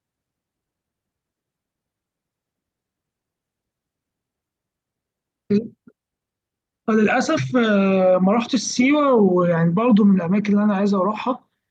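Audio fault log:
No faults heard in playback.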